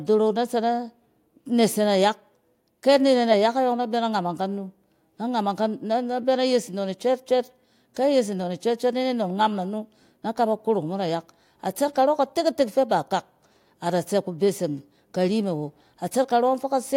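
A speech recording with no technical faults to report. Nothing in it calls for a time or a cause.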